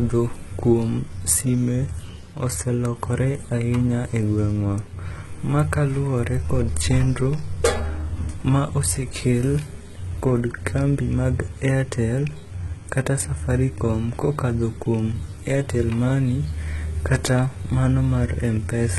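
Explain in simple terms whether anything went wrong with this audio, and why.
Something did go wrong, and it runs through the whole recording rather than at one spot. The speech sounds like it went through heavy HE-AAC compression, likely squeezed very hard to save space. That kind of encoder keeps only the lower part of the sound and fakes the treble by copying lower bands upward. So the top still sounds bright but isn't real, the s sounds come out gritty and lispy, and nothing at all survives above about 11.8 kHz.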